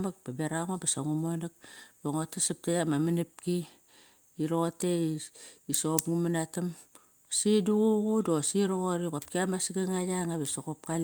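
No technical faults can be heard anywhere in this recording of speech.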